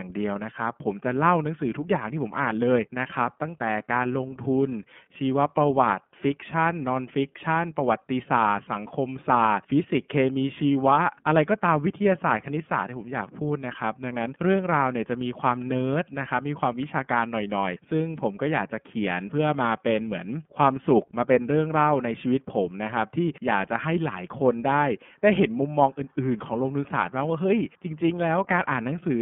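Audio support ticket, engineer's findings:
iLBC codec across the whole speech track, plainly audible. Band cut to about 150 Hz–3.4 kHz, nothing up top. Rough, slightly synthetic texture from coding each frame's excitation independently; the grain fits 30 ms frames, the 13.33 kbps mode.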